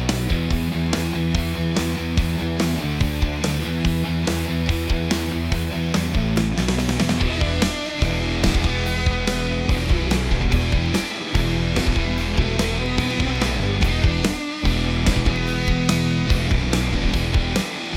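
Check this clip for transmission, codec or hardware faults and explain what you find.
One hardware fault runs through almost the whole clip. Periodic USB or driver dropouts occur from 0.12 s to 17.86 s, every 0.25 s, about seventy in all. At each interval the USB bus or audio driver is briefly blocked, and a tiny sliver of audio, a small fraction of a millisecond, is skipped outright rather than replaced by silence. The splice leaves a small discontinuity, heard as a steady train of ticks at four per second wherever signal is present.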